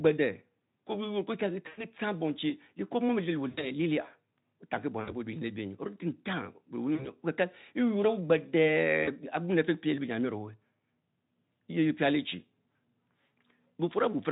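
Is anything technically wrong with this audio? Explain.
Yes. Speech breaks up five times, at 1.67–1.85 s, 3.49–3.67 s, 5.01–5.14 s, 6.95–7.10 s and 9.04–9.10 s. This is VoIP packet loss concealed by the speech codec. About 100, 80, 60, 40 and 40 ms of audio were lost. The decoder stretched its last pitch and filter with falling gain. Each gap turns into a fading buzzy tone or coloured-noise smear. The sound stays weak briefly afterward. The Speex codec itself, at a rate fitting about 18 kbps, adds little audible damage.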